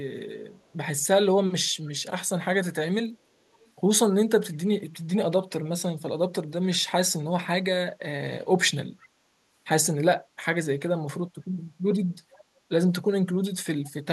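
Faint, delayed scraps of the speech return at 3.53–3.69 s, 12.33–12.42 s and 13.84–13.91 s, each trailing the original by 494 ms and sitting roughly 30 to 35 dB below it, brief. These are echo leak. The likely cause is a far end playing the call over a loudspeaker, where the echo canceller failed to fully remove what its microphone picked up and sent that residue back.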